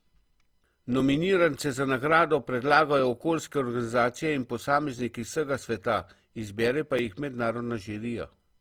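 Speech, with Opus compression damage plainly audible from start to finish. The speech sounds grainy and rough, with a noisy sheen where tonal detail should be. The full bandwidth survives, so it is not muffled. This likely comes from Opus music-mode coding at a low bitrate, around 24 kbps.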